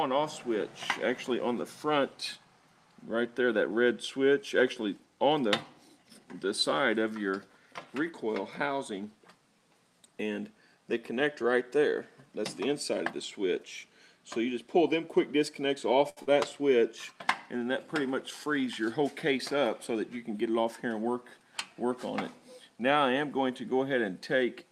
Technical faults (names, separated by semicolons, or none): short stall from a late packet; short concealed packet loss; jitter buffer speed-up